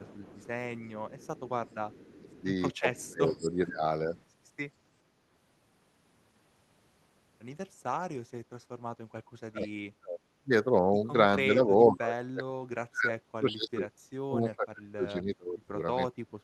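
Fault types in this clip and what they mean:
Echo leak: a faint copy of the speech trails about 430 ms behind, well below it, mostly early on; likely loudspeaker pickup the echo canceller failed to remove.
Speech suppressed in double talk: the speech dips sharply and breaks up in pieces, deepest from 11.55 s onward; likely the echo canceller turning down both talkers during overlap.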